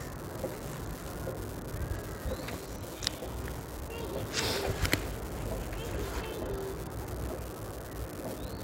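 From start to end, an unreliable data bit adds a steady crackle. One data line is marginal, so its bit flips at random in a share of samples. Each flip makes a spike of identical size. Together they form a constant fizz that persists through the quiet gaps too.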